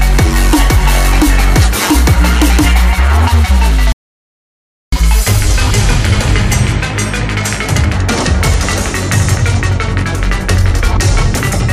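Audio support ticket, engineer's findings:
Playback stall, 3.92 to 4.92 s: output drops to silence for 1.0 s mid-flow. Likely player buffer underrun or blocked audio thread starving the output device until data arrived again.

Catch-up at higher speed, 4.92 to 7.92 s: audio runs at 1.1x with pitch raised roughly a semitone and a half. Player resampling the backlog to recover some of the lost time.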